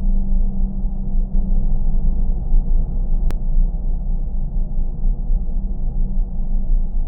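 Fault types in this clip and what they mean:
Doubled audio track: From 1.35 to 3.31 s, a second full-band copy trails about 150 ms behind, at roughly equal level, likely from a slower duplicate capture path.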